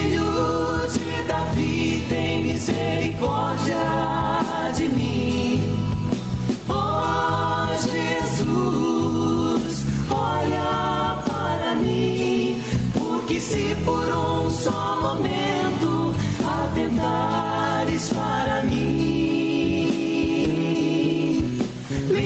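Gain pumping runs throughout: the level swells and ducks by around 10 dB, likely a fast limiter reacting to excessive input gain, seen as a breathing waveform envelope.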